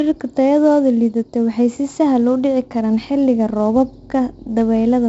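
From start to finish, the speech carries 4-bit ADPCM compression. Each sample is coded as a coarse step from a prediction, so the error rides on the signal as a heavy gritty hiss. Nothing survives above 7.7 kHz, which fits a 64 kbps stream.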